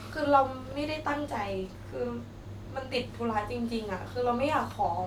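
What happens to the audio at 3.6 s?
Nothing goes wrong at 3.6 s: the speech continues intact through that moment, with no dropout, click, distortion or other fault to be heard.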